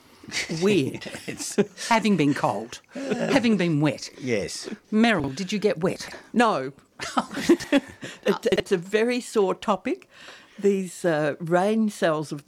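Chunks out of order at 5.2–5.28, 5.96–6.12, 7.48–7.64 and 8.52–8.6 s: 40 ms blocks of audio play one or three chunks late, jumbling the sound.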